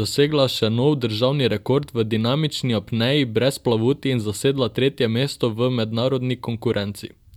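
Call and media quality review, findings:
No audible faults found in this speech recording.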